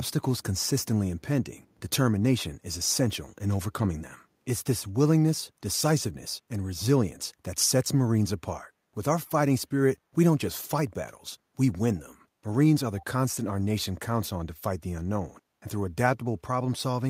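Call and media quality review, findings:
Echo leak at 13.0–13.05 s. Brief faint scrap of the speech returns about 312 ms late, well below the direct speech. Likely cause: far-end loudspeaker pickup not fully removed by its echo canceller, residual sent back into the call.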